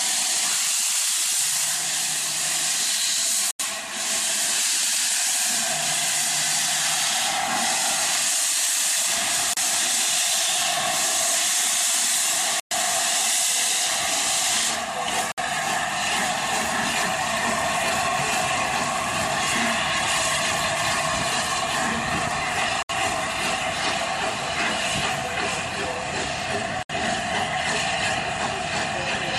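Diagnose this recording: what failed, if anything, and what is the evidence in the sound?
The sound drops to brief silences six times: 3.51 to 3.60 s (87 ms), 9.53 to 9.57 s (34 ms), 12.60 to 12.71 s (113 ms), 15.32 to 15.38 s (59 ms), 22.83 to 22.90 s (68 ms) and 26.83 to 26.90 s (66 ms). At the playback stage, this is likely a Bluetooth stall: interference delayed packets on the wireless link, the headphones' buffer emptied, and output paused until resent audio arrived.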